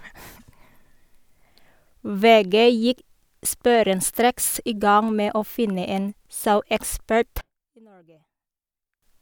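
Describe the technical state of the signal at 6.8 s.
At 6.8 s the speech signal is intact, with no audible fault at that moment.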